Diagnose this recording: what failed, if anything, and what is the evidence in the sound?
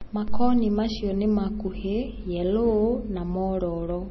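The failure sits at the codec stage, and the likely cause is low-bitrate audio saved at a high bitrate. For the whole clip the speech carries nothing above about 5.9 kHz, with the swirly, smeared texture of a heavily squeezed encode, which points to an MP3 pass near 24 kbit/s later re-saved around 256 kbit/s. A spectrogram shows a flat, hard ceiling at 5.9 kHz from start to end. The second encode cannot rebuild what the first one discarded.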